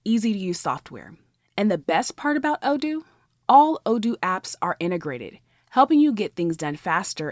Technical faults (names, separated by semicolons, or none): none